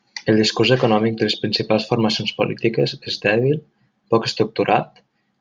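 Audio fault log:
1.8 to 5.28 s, resampler restarted on every block: the sample-rate converter, which fits a 48 kHz to 44.1 kHz change, began afresh on each 40 ms block. Its filter therefore lacked the true neighbouring samples at every block edge and left a small error at each join. These repeat at 25 Hz, heard as a rough buzz riding on the speech that vanishes in pauses. A spectrogram shows faint vertical lines every 40 ms under the speech, and the waveform shows tiny steps at the joins.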